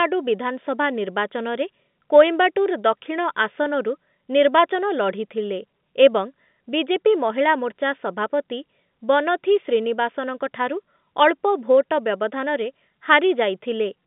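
No technical faults occur in this speech, which comes over an ordinary telephone line with nothing above about 3.8 kHz.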